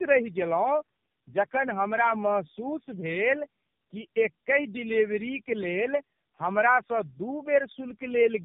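Tandem speech coding runs through the whole clip. The speech appears to have passed through three low-rate narrowband coders in a row, of the AMR-NB kind, each re-encoding the previous stage's already damaged output, with plain telephone-grade links between them. Every pass adds its own errors on top of the last, so the voice sounds rougher, more muffled and more warbly than a single coder would leave it, and nothing survives above 3.6 kHz.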